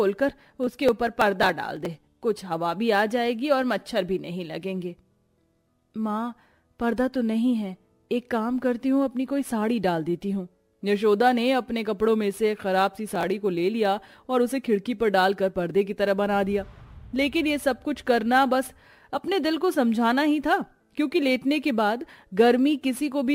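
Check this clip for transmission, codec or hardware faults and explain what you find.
Processor overload crackle appears in two bursts. From 0.64 to 1.86 s, and again from 13.13 to 13.30 s, the processor misses run after run of very short buffer deadlines. Each missed buffer is skipped rather than held, so the output jumps ahead with hard edges. The skips add up to a gritty, tearing crackle that stops once the load eases.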